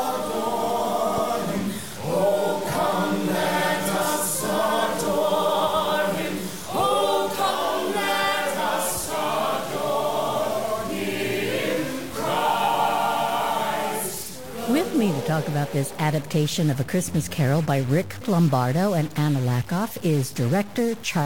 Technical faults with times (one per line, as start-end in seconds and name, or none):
0.00-21.25 stuck bit